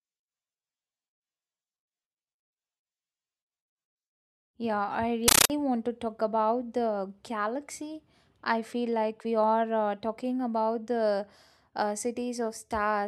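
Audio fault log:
5.28–5.50 s compressed stream played as audio: undecoded AC-3 data, consistent with a 640 kbps stream, bursts out as loud chattering static before "want to talk about"; the waveform shows 13.3 ms noise blocks separated by silent padding, repeating at 31.25 Hz, and the spectrogram shows matching broadband stripes.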